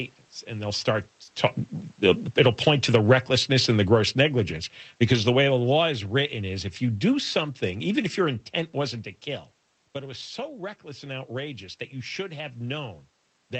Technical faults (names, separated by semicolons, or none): short concealed packet loss; automatic gain falling